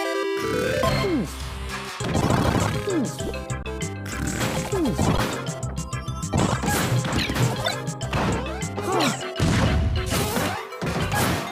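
At 3.63 s the sound freezes for about 21 ms, until 3.65 s. This is an underrun with held sample. The output buffer ran dry, and the converter held its last value until data came back. The waveform sits flat, so the sound simply stops without a sharp click. The gap fits a 1024-sample buffer. Nothing appears to be lost. Playback resumes where it paused, so the restart is soft. The same fault recurs at 5.17 s, lasting about 11 ms, which fits a 512-sample buffer.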